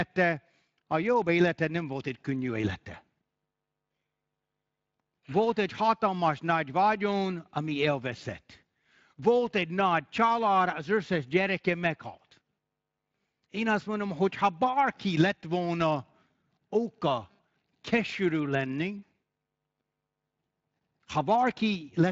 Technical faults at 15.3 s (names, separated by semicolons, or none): none